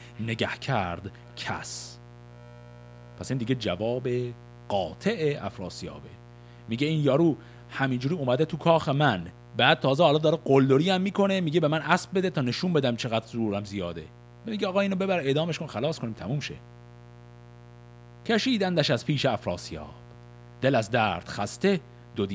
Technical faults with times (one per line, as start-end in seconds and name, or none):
0.00-22.35 mains buzz
0.15-3.47 echo leak
6.22-6.33 background gated by the echo canceller
9.34-9.56 background gated by the echo canceller
14.11-14.22 background gated by the echo canceller
16.62-18.23 background gated by the echo canceller
20.04-22.14 background gated by the echo canceller